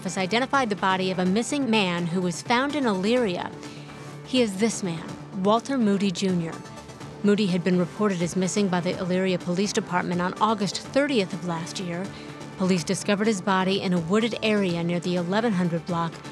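No technical faults can be heard anywhere in the signal; it holds steady throughout, with no interruptions, distortion or level problems.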